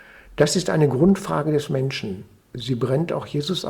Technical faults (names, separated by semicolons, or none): none